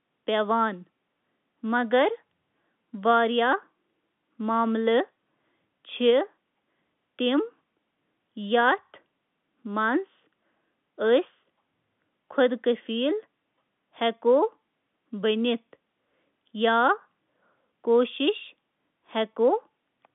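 No technical fault can be heard anywhere in this speech recording. It carries the narrow band of G.711 telephone coding, with the line passing roughly 150 Hz to 3.5 kHz and nothing audible above about 3.7 kHz.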